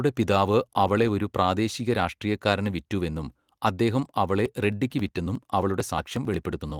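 Speech, and from 4.46 s to 6.70 s, right after "രാഷ്ട്രീയക്കാരന് വിറ്റുവെന്നും അദ്ദേഹം അവളെ", you get periodic USB or driver dropouts: a tick every 0.09 s, around thirty of them, each one a skip of roughly 10 ms. That pattern suggests something stalling the bus or driver on a fixed cycle, with the missing audio dropped rather than padded with silence. There's also some light Opus voice compression in the background, but it isn't the problem.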